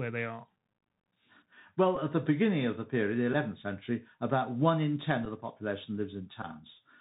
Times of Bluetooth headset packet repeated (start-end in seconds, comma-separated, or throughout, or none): 1.95-1.98, 3.33, 5.25, 6.42-6.46